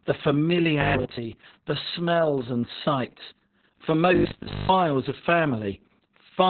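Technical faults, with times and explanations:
Throughout: Opus voice compression. The speech is muffled, hoarse and faintly robotic, and the damage is heavy. The codec has fallen back to its narrowest SILK band, so everything above about 4 kHz is gone, and the excitation is coded coarsely. This fits a very low rate near 6 kbps with long frames. On a spectrogram, energy stops abruptly at 4 kHz, and harmonics look smeared and blocky. The waveform looks ordinary.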